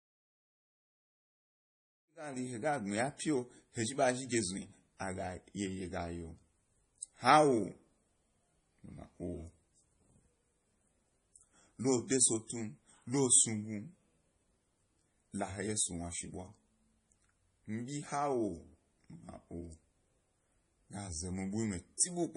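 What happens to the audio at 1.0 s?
At 1.0 s the speech carries MP3 compression damage, which runs through the whole clip. The audio is still ahead of the smooth fade-in that completes at 2.59 s. There is nothing above 10.5 kHz, so the top end is missing. The damage is heavy. Weak frequency lines drop in and out between frames, giving a watery, swirly texture. The sound most likely comes from a low bitrate, around 32 kbps.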